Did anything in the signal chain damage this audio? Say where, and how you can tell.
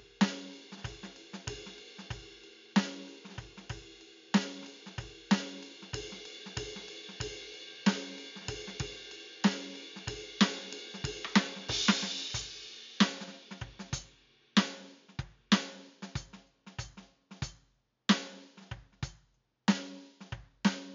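No, nothing in this music points to signal-chain damage.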